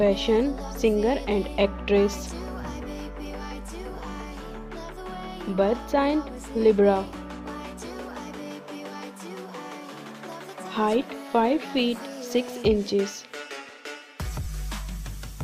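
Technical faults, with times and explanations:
No technical faults can be heard anywhere here.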